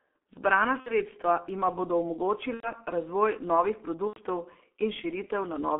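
Throughout, the speech is squeezed into a telephone band of roughly 250 Hz to 3.4 kHz and sounds muffled and hoarse with smeared consonants. That is heavy G.723.1 codec damage, consistent with its 6.3 kbit/s mode and slow 30 ms frame updates. The muffling comes from both the narrow band and coarse coding.

VoIP packet loss concealed by the speech codec then appears three times. From 0.80 to 1.00 s, just before "jima bodo", about 60 ms of audio is lost. From 2.54 to 2.73 s, between "jima bodo" and "razvoj novih", about 90 ms is lost, and from 4.07 to 4.20 s, after "razvoj novih", about 90 ms again. Each time the decoder extends the last sound into a fading tone or noise rather than cutting off abruptly, which is what separates this from a plain dropout; in the two 90 ms gaps it mutes from the third lost frame. The speech also stays weak for a moment after each gap.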